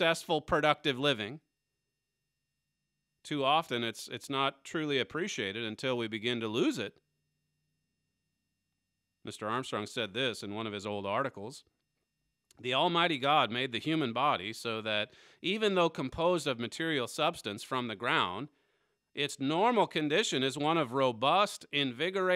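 No technical faults can be heard anywhere in this audio.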